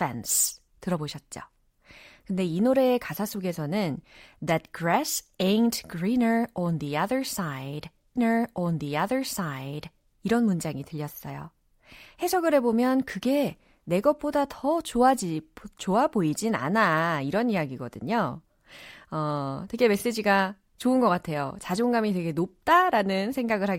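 Speech, and around 8.15 s there's a stream segment repeated fault: the player fetched or queued the same chunk twice, so the stretch from 8.15 to 10.15 s plays again, adding a full 2 seconds to the programme. You'll catch a small blip right where it jumps back, then the same audio rolls on a second time before carrying forward. A 2-second repeat fits a segmented stream where one segment got requested or buffered twice.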